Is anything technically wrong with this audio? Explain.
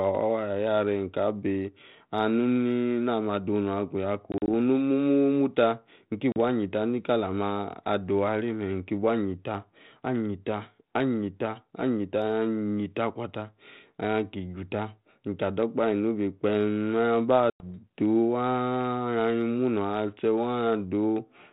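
Yes. Packet loss on an ADPCM call occurs at 4.32–4.49 s (80 ms lost in short gaps), 6.32–6.37 s (40 ms) and 17.50–17.70 s (100 ms). The silent holes appear as flat waveform gaps and blank spectrogram columns. Afterwards the decoder's predictor and step size lag the sender's, so the audio returns slightly distorted.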